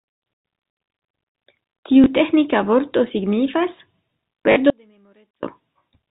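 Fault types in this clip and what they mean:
Packet loss with last packet repeated: the receiver lost a stretch of data and filled it by playing the last good packet again. Here that happens twice, a single 20 ms gap at 2.04 s just before "teĥnika vorto signifas", and a 40 ms gap at 4.52 s, which fits two packets of 20 ms each. The first comes across as a small blip and the second as a short robotic stutter, since the same chunk is replayed back to back.
Audio dropout to a faint residue: from 4.70 s to 5.43 s, about 0.73 s, the speech abruptly falls away, leaving only a faint leak of sound sitting roughly 35 dB under the normal level before it snaps back in mid-flow. The hard cut in and out tells it apart from a natural pause or fade, and the likely cause is the signal path dropping out while the chain after the break stayed live, so a little bleed still got through.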